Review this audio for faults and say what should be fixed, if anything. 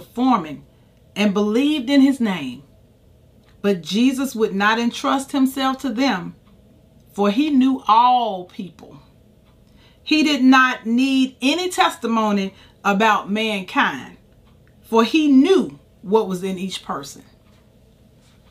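No faults found; nothing here needs fixing.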